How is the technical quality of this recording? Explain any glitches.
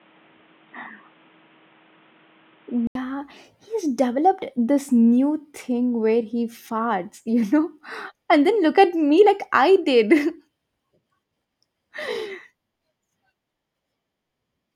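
The recording opens with a fault. From 0.0 to 2.95 s nothing reaches above 3.8 kHz, so the speech sounds dull and boxy, with faint added background noise well below it. An 80 ms gap follows before full bandwidth returns at the same level. This is likely an input switched to a poorer device. On a spectrogram the top is cut flat at 3.8 kHz until the break, and the waveform shows a brief dropout.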